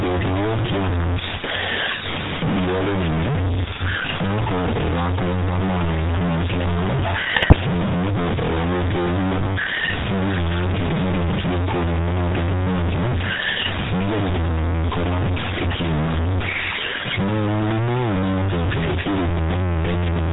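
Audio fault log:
Throughout, low bit depth without dither: quiet passages turn gritty and grainy, and the grain shifts with the sound instead of sitting still like hiss. The faintest parts sputter between a couple of steps or drop out entirely. The error sits only about 10 dB below the signal, which fits likely truncation to around 3 bits with no dither, so the rounding error stays locked to the waveform and is heard as distortion rather than steady noise.
Throughout, GSM full-rate codec: the speech carries a buzzy, gravelly roughness and nothing above 4 kHz, so sibilants and brightness are gone. The coder models the vocal tract with a filter and feeds it a sparse, regularly spaced pulse excitation that keeps only every third sample, which fits the 13 kbps full-rate codec. That thinned excitation makes the voice rasp, and the damage is plainly audible across the whole clip.
7.36–7.58 s and 9.36–9.57 s, GSM bit errors: each burst breaks the speech into squawks, pops and gargling for about a fifth of a second. 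Corrupted bits reached the decoder, scrambling the filter, pitch and gain values across several consecutive frames. The spectrum bends into unnatural shapes or the level blows up, frame after frame while each burst lasts. The second burst has a denser error rate than the first.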